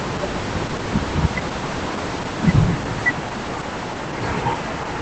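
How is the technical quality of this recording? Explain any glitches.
The technical quality is limited by plainly audible Opus voice compression across the whole clip. The speech has no content above roughly 8.6 kHz, which fits the wideband setting of the SILK linear-prediction coder. Its low bitrate, consistent with about 12 kbps, forces coarse coding of the excitation signal in each short frame. The result is dull, muffled speech with a hoarse, slightly robotic texture.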